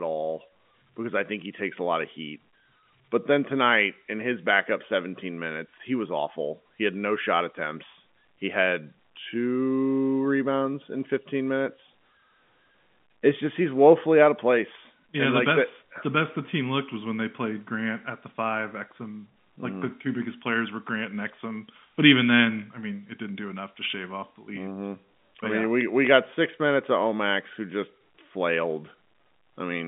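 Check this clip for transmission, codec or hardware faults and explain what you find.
No faults found; the speech sits in the G.711 telephone band of 150 Hz to 3.5 kHz with nothing above 3.7 kHz, which is simply the line format.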